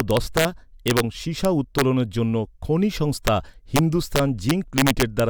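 Integer overflow hits the speech at 0.00–0.45 s, 0.88–1.00 s, 1.45–1.82 s (just before "জন্য খনি"), 3.27 s (just after it), 3.76–3.79 s and 4.16–5.20 s. Peaks driven about 1 to 3 dB past the integer limit wrap to the opposite sign instead of being limited, giving violent cracks much sharper than clipping.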